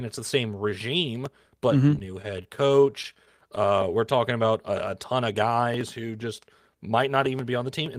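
From 1.95 to 3.58 s the speech stutters through fourteen tiny holds. These are repeated stalls (stutter): late packets kept draining the jitter buffer, so the last sound was stretched.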